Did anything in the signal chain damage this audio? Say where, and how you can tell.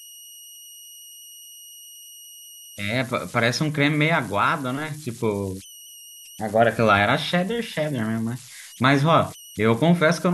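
Yes, at the converter stage. Throughout the clip, converter idle tones can be heard: a tone around 3 kHz in the pauses between speech, and a grainy, noisy texture under the quieter passages, with the error sitting about 22 dB below the signal. An undithered delta-sigma converter, fed a very small input, settles into repeating bit patterns. Those patterns produce tones whose pitch follows the input's DC offset, which is why a tone appears where the audio should be silent.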